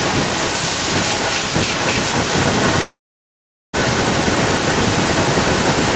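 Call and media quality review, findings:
Echo leak, 0.00 to 5.96 s. Delayed copy of the speech throughout, 258 ms behind, about as loud as the direct signal. Likely a far-end loudspeaker with its echo canceller failing to suppress the mic pickup. Residual returned to the sender.

Call audio freeze, 2.81 to 3.75 s. Last sound stretched into a fading fill, then about 0.79 s of silence. Speech resumes where it stopped, nothing lost, everything after pushed about 920 ms later. Likely packets held in transit and the jitter buffer running dry, with concealment filling the wait.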